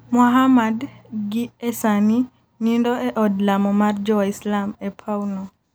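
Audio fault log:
Nothing stood out on listening to this speech recording.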